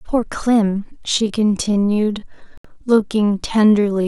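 From 1.08 s to the end, the speech suddenly slows to about 0.65 times its pace while the pitch holds steady, so it drags. That's likely a time-stretched section, with software repeating short slices to pad it out.

Inside that stretch, at 2.58 s, the audio cuts to silence for about 70 ms, then picks up as if it had kept going. That's likely a Bluetooth dropout, and a gap that long fits roughly three packets missing the headphones.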